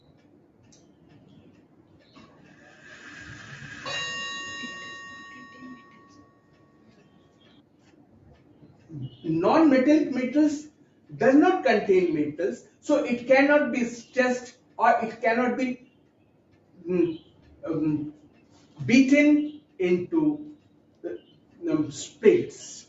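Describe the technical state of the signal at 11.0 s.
At 11.0 s you're in the middle of a stretch, from 10.70 to 11.12 s, where the sound is cut by the noise suppressor. It took this sound for noise and pulled it down by up to about 10 dB for roughly 400 ms, so the level sinks or the tail is cut short.

That's part of a wider issue: a noise suppressor built for speech is applied to music or sounds across the whole clip. It keeps turning sustained parts and ambience down, with the loss swinging by roughly 10 dB, so the audio pumps or thins rather than holding steady. The band stops at 8 kHz, consistent with the Opus call path it went through.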